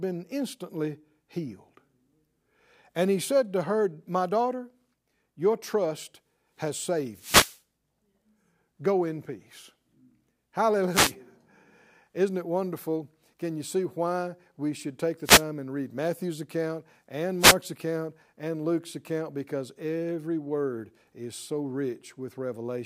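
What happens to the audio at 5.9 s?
Nothing goes wrong at 5.9 s: the speech runs through that moment intact, with no dropout, click, distortion or other fault.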